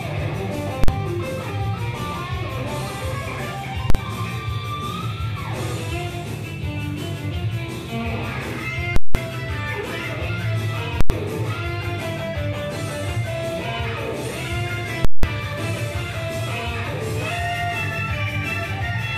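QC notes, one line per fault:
0.84–15.23 s, invalid numbers at full scale: five blocks where the output jumps to one extreme value, far beyond the audio's peaks, and stays pinned there, at 0.84–0.88, 3.90–3.95, 8.96–9.15, 11.01–11.10 and 15.05–15.23 s. The blocks last 46, 93 and 186 ms, which fits processing blocks of 2048, 4096 and 8192 samples. The longer ones give a loud pop at the start and end with silence between, and the 46 ms ones collapse into a single bang. Ordinary clipping would still follow the sound's shape, but here the content vanishes for exactly one block.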